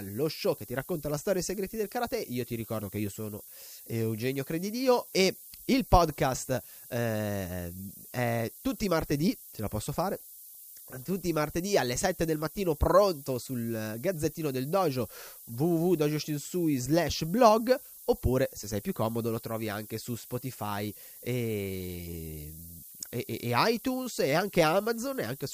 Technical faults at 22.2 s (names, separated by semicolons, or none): low bit depth with noise shaping